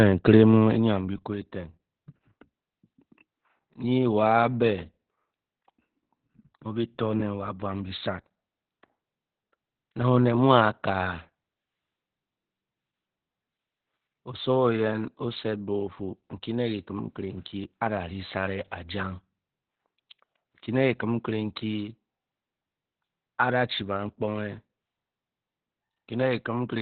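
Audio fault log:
throughout: Opus voice compression. The speech is muffled, hoarse and slightly robotic, with nothing above 4.4 kHz, which fits narrowband SILK coding at a very low bitrate near 8 kbps. A spectrogram shows a hard ceiling at 4.4 kHz and coarse, smeared harmonics below it.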